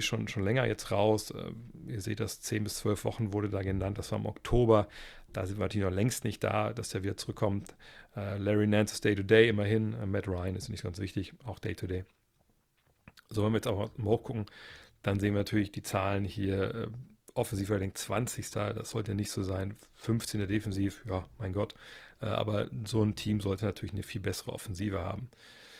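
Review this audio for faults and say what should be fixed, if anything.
An adaptive stream at a lower bitrate took over at 11.45 s, right after "ist nicht ganz wichtig", and stayed there to the end of the clip. The player switched to a cheaper rendition, which fits a step from roughly 64 to 24 kbit/s Opus. The speech changes quality abruptly with no gap, and coding artefacts become audible for the remainder. To prevent it, give the connection more headroom or set a higher minimum bitrate in the adaptive ladder so the player doesn't drop this far.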